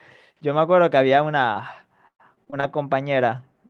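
At 1.53 to 1.57 s, a short concealed packet loss leaves about 20 ms of audio missing and patched by extending the preceding sound. It comes across as a brief smear or wobble. A spectrogram shows the harmonics stretching flatly across the hole before resuming.

From 2.07 to 2.64 s, repeated packet loss produces choppy sound with pieces missing. Five gaps, the longest 116 ms, remove about 200 ms, and roughly a third of the stretch is synthetic continuation. The waveform shows repeated, too-regular cycles, and the spectrogram shows frozen, banded harmonics.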